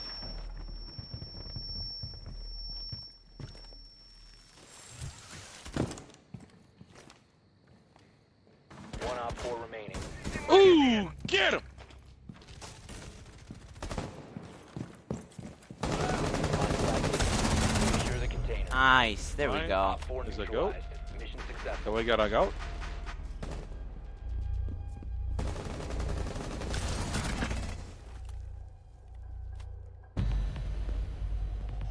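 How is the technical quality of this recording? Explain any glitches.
Nothing in the recording stood out as a technical problem on listening.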